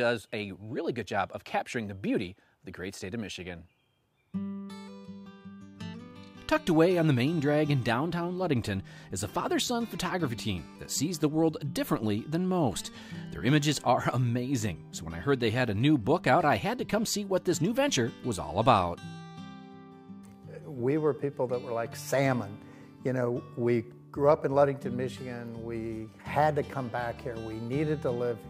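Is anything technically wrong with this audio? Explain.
No, nothing in the signal points to a technical problem anywhere in the recording.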